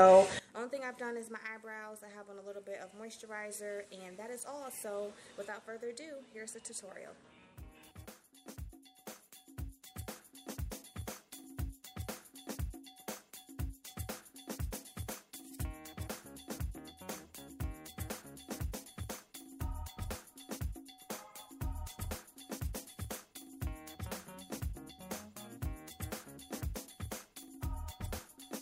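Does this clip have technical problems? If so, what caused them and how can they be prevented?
Yes. From 0.39 s to the end, the mono sum collapses by about 20 dB: the shared content, background included, nearly disappears, leaving a faint residue of whatever differs between the channels. The likely cause is one channel inverted, so the shared material cancels when left and right are added. On a waveform the level drops sharply from 0.39 s, and the summed spectrogram loses energy across the band. Check polarity with a correlation meter before mixing down.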